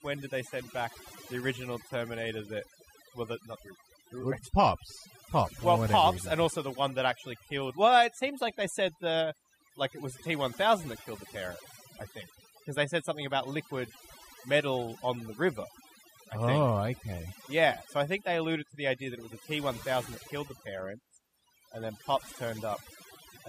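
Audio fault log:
Throughout: overdone noise removal. The speech was processed by a noise reduction setting pushed too hard, which pulls individual frequency bands far down or out whenever they sit close to its noise estimate. The background drops and breaks up into twinkling specks, and softer parts of the voice are swept away too. A noise gate would instead cut the whole signal at once between phrases, with no twinkling residue.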